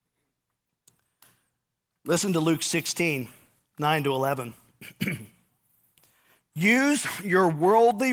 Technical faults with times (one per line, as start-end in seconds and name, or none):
none